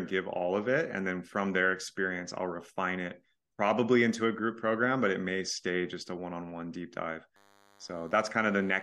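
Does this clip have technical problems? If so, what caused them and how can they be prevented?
Yes. From 7.36 s to the end at 8.83 s, just after "on one deep dive", there is DECT cordless phone buzz. A nearby handset or base transmits radio bursts 100 times a second, and the audio circuitry rectifies them into a thin, harsh 100 Hz buzz, roughly 30 dB below the speech. A spectrogram shows evenly stacked horizontal lines at 100 Hz and its harmonics, and the waveform shows regular spikes every 10 ms. To prevent it, keep DECT phones and bases well away from microphones, cables and interfaces.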